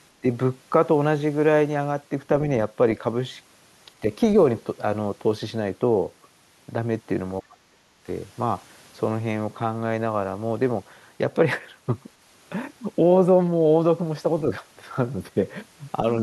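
Speech suppressed in double talk occurs between 7.41 and 8.07 s in this speech recording. Within that window the talker's level dips sharply for about half a second in total, falling at its deepest by roughly 30 dB, so parts of the speech nearly vanish. The likely cause is an echo canceller faced with both sides talking at once: unable to tell the near talker from the returning loudspeaker echo, it attenuated everything it picked up.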